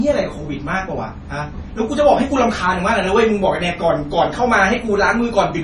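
From start to finish, the speech has nothing above 11.2 kHz, and the top end carries the smeared, swirling texture of heavy MP3 data reduction. This is likely low-bitrate audio saved at a high bitrate: the cut-off and artefacts fit an earlier MP3 pass at around 32 kbit/s, later re-encoded at a much higher rate. The second encoding adds almost nothing audible, but it cannot restore the detail the first one discarded.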